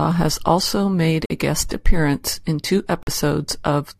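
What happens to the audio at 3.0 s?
A corrupt frame muted at 3.03 to 3.09 s: the decoder rejected damaged compressed data, leaving an abrupt 58 ms silence, about two frames long, with timing unchanged.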